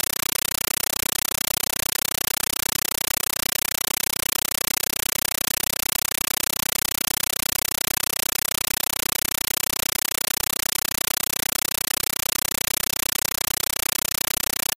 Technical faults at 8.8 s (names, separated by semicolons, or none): compressed stream played as audio